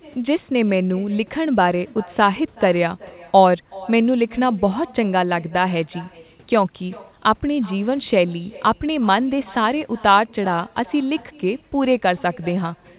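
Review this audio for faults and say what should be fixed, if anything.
Echo with no canceller throughout: the far end's microphone picks up its loudspeaker and nothing removes it, so every phrase returns around 400 ms later, about 24 dB quieter. To prevent it, enable acoustic echo cancellation at the far end or have that side use headphones.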